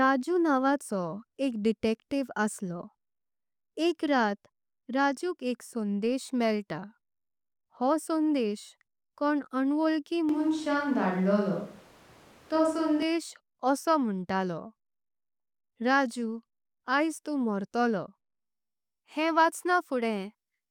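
Speech, with a switch to a distant microphone from 10.29 to 13.02 s, right after "हो संदेश कोंण अवोळकी". The sound abruptly turns roomy and hollow with thinner bass and room noise about 30 dB below the speech, likely because the close microphone dropped out. Unlike added reverb, the tone, bass and noise floor all change together, with little level shift, and snap back at 13.02 s.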